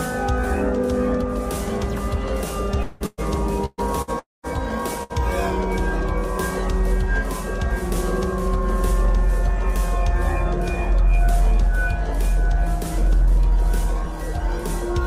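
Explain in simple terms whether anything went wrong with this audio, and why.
Long network dropout at 2.83 to 3.03 s and again at 4.19 to 4.46 s. The sound stops arriving, and the player tries to cover the hole by stretching out the last bit it had into a fading buzz. The first gap, about 0.2 s, is entirely filled that way. In the second, about a quarter second, the filler dies out and most of it is plain silence. These are likely dropouts in the network connection. When the audio returns, the missing part is simply gone.

Burst of packet loss at 3.06 to 3.21 s, 3.66 to 3.81 s, 4.02 to 4.10 s and 5.03 to 5.13 s. Each time, a short run of audio, about 120 ms in the first two and about 60 ms in the last two, never arrived. The player held the previous sound and faded it, so you hear a brief smeared buzz or hiss, with a tiny silence at the end of the first two. Then the audio jumps ahead past what was lost.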